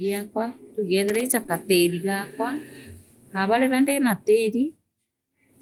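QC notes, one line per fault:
1.08–1.21 s, loose connector crackle: for about 0.12 s the signal is chopped as a worn or dirty contact rapidly makes and breaks, giving an irregular burst of scratchy crackle over the speech. Each break interrupts the audio, and any DC on the line adds a pop. On the waveform it looks like a cluster of jagged spikes and brief dropouts. On the spectrogram it shows as thin vertical broadband streaks, spaced unevenly.
1.43–1.50 s, short concealed packet loss: two back-to-back gaps of 20 ms each, at 1.43 s and 1.47 s, which fits 20 ms packets that arrived too late to decode. The receiver covered each hole by extending the preceding sound, from its pitch where voiced and as shaped noise where not, then faded back into the real audio. The result is a brief smear or wobble, and a short consonant may disappear. On the spectrogram, harmonics run flat or blur across the span.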